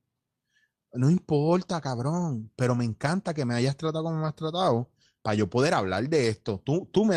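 Speech clip, no technical faults.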